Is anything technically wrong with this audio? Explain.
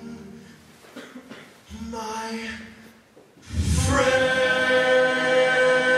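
No, nothing technically wrong turns up anywhere in this audio, so there's nothing to flag here.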